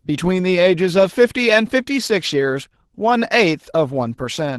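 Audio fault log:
throughout: Opus voice compression. The speech sounds plainly hoarse and slightly robotic. The band stays wide, but a starved bitrate, which fits roughly 16 kbps, leaves the linear-prediction excitation and the upper layer above 8 kHz coarsely coded.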